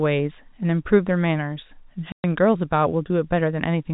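From 2.12 to 2.24 s the speech suffers packet loss filled with silence: a run of packets never arrived, about 120 ms in total, which fits six 20 ms packets, and the receiver inserted silence. The speech drops into a hard-edged hole, while the G.711 telephone band around it stays intact.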